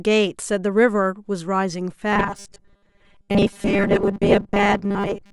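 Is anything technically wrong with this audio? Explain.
Yes, from about 2.13 s to the end at 5.33 s the speech turns into robotic sound from repeated short buffers. The voice becomes a stiff, metallic buzz pinned at 200 Hz that only loosely tracks the words. That's likely new audio arriving too slowly, so the software keeps replaying the last chunk, which fits a 5 ms buffer given the buzz frequency. Roughly 70% of that stretch is repeats, with the real audio skipped.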